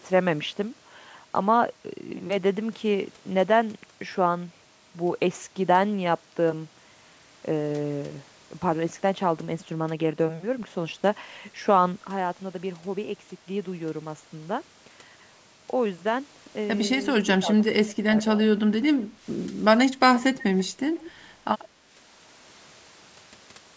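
At 12.09 s the level of the speech and the background noise falls together, instantly, by about 6 dB, and stays down until the end of the clip. This is a sudden gain jump. There is no fade between the two levels, which points to a digital gain change applied from one sample to the next instead of over a ramp. That is likely a setting change or bit shift in the processing chain.

Between 17.24 s and 18.39 s the speech dips in pieces, with the deepest drops reaching roughly 20 dB and about half a second of the stretch affected in total. This fits speech suppressed in double talk. The pattern suggests the far side was talking at the same moment, and the echo canceller likely could not tell this talker apart from loudspeaker echo, so it attenuated both.

Faint delayed copies of the speech then appear at 20.38–20.64 s, 20.95–21.11 s and 21.59–21.67 s. Each trails the original by 135 ms and sits about 20 dB below it, or about 25 dB in the last and shortest fragment. 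This is echo leak. The short, scrappy pieces are residual loudspeaker sound that the microphone picked up and the echo canceller did not fully remove, likely on a loudspeaker-playback endpoint, so it was sent back down the line.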